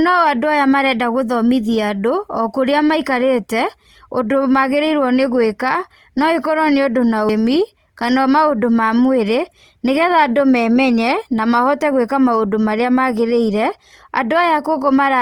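Opus compression runs throughout the speech, and the damage is plainly audible from start to finish. The coarse quantisation points to a low rate, around 24 kbps, likely in the codec's music-oriented CELT mode at full bandwidth. That mode preserves each band's overall energy but fills starved bands with folded copies of lower ones or with noise. The voice therefore keeps its brightness and avoids swirling holes, yet sounds grainy, rough and noisy in its tonal parts.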